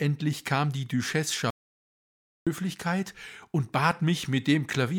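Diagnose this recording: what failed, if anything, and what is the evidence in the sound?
Audio dropout to silence, 1.50 to 2.47 s. Speech stops, with no room tone. Input was likely lost at the device, link or a mute.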